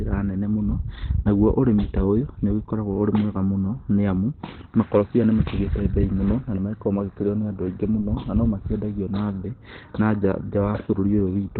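The speech sounds muffled and hoarse throughout, with nothing above 4.3 kHz, likely from Opus compression working in its narrowband speech mode at a low bitrate.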